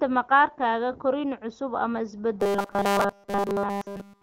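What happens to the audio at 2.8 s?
At 2.8 s the speech has a robotic sound, the kind that comes from repeated short buffers. It runs from 2.40 s to 4.23 s. The voice becomes a rigid, metallic 200 Hz buzz. The likely cause is the last 5 ms looping continuously while new audio is skipped.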